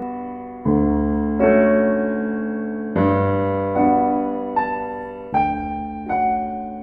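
Throughout the music, channel delay (comb filtering) gives a rough, slightly doubled colour. One channel runs around 20 ms late, and summing cancels shared content at evenly spaced frequencies from around 20 Hz. Unlike flanging, the notches stay fixed, and the delay is too short to hear as echo.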